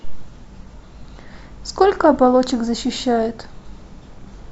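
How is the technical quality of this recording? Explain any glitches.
No audible glitches or faults.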